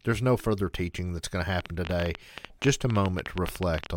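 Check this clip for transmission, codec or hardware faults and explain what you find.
There's one fault here: a train of clicks running from 1.61 to 3.87 s, about 12 per second at an uneven pace, some thirty in all. Repeated pulses of similar shape, likely from electrical interference or a struggling interface, tick sharply over the speech and the pauses, peaking well above it.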